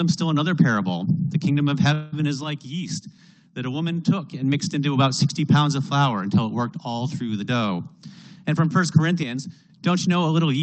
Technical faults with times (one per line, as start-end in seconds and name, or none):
1.93-2.21 call audio freeze
2.44-4.42 one channel drops out
7.41-8.91 jitter buffer speed-up
9.23-9.70 one channel drops out